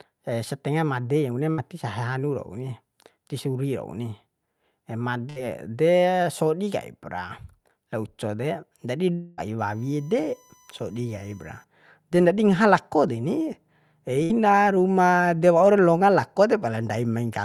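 At 1.51 s the speech breaks up briefly. This is a burst of packet loss, running to 1.61 s. A few packets never arrived in time. The receiver stretched the last sound for about 60 ms, fading it, so it comes out as a short buzz or hiss. Then the speech jumps ahead. About 60 ms of it is gone. The same thing happens at 5.30 to 5.39 s, and again at 14.24 to 14.32 s, each with the same sizes.

From 9.14 s to 9.41 s there is a longer break. The last sound is drawn out as a buzz or hiss for about 0.24 s. It fades but never drops to silence. Then the speech resumes further on, with about 0.24 s missing. This is most likely a long network dropout, where the stream stopped arriving for a stretch and the receiver filled the whole gap by continuing the last sound.

Just after, from 9.59 s to 11.64 s, a fixed high whine sits under the speech. This is USB whine. Current drawn by the USB bus in 1 ms frames leaks into the audio through the power or ground. 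It sets up a 1 kHz series of tones, and the strongest is at 6 kHz. It sits about 35 dB below the speech.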